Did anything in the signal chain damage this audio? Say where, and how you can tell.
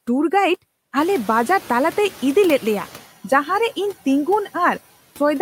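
Yes. Throughout the speech, the background noise dips between phrases and swells back up under the speech. These are noise suppressor artifacts from call processing, where frame-by-frame band gains pull the steady noise down by about 12 dB.

At 0.97 s the room noise jumps by about 17 dB. At first it passes with only about 7 dB of reduction, then gradually sinks until 3.03 s. That is the noise suppressor catching up, because its noise estimate needed about 2.06 s to adapt to the louder background.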